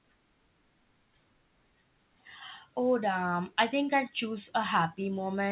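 At 0.52 s the speech skips ahead: about a fifth of a second was discarded and the two sides butt together with no silence, unlike a dropout's audible gap. The narrowband call sound, with nothing above 4 kHz, fits a G.711 link.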